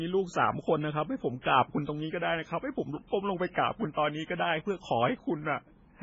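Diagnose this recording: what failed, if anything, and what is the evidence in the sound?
Throughout the speech the sound is watery and swirly, with nothing above 7.6 kHz, so sibilants are dull and the faint detail that remains chirps and flickers from frame to frame. This is the codec stage, likely MP3 compression at a very low bitrate, which fits something near 16 kbps. Starved of bits, the encoder cuts the treble at a fixed frequency and zeroes weak spectral lines, which then switch on and off between frames.

Pre-echo is audible twice: a short smear of hiss runs ahead of a sharp onset from 1.41 to 1.45 s (about 35 ms) and from 3.51 to 3.56 s (about 44 ms), and both attacks sound softened. This also originates at the codec. The transform spreads its quantisation noise across the whole block, so noise scaled to the loud onset leaks into the quiet moment just before it.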